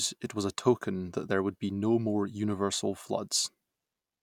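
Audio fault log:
No faults are present in this speech recording. Nothing in it calls for a timed entry.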